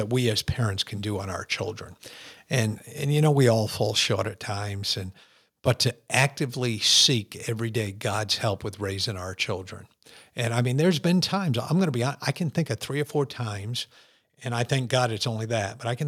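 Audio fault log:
4.29 s microphone volume stepped down. Just after "we all fall short", the speech and the background drop together by about 3 dB in one sudden step. The call software likely lowered the device's input volume because it judged the microphone too loud.
6.14–6.24 s microphone overload. Between "times and but to" and "seek every day", the loudest peaks push about 6 dB past the converter's limit. A small share of samples have their tops cut flat. This adds a harsh, crackly edge. The input volume was likely set too high.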